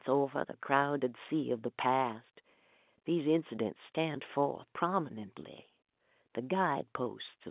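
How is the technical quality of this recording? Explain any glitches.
Nothing goes wrong in this telephone-band speech recording.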